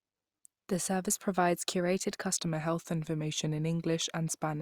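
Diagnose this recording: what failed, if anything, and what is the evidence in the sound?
A wrong sample rate fault at the playback stage starts at 2.34 s and runs to the end. The speech slows and drops by about 1.5 semitones, playing at 0.919 of normal speed, which fits 48 kHz material clocked out at 44.1 kHz with no resampling. On a spectrogram, harmonics and formant bands step downward at 2.34 s and syllable patterns stretch about 8 percent in time. The waveform's envelopes widen by the same ratio.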